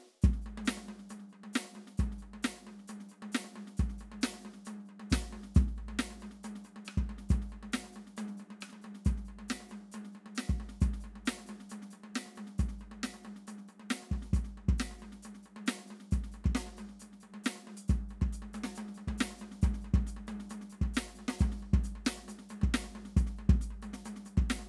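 From start to end, the music plays with the wrong sample rate. It runs about 1.09 times fast and about 1.5 semitones sharp, which fits material recorded at 22 kHz played at 24 kHz. On a spectrogram, every harmonic and the upper bandwidth edge sit proportionally higher, and events are compressed in time.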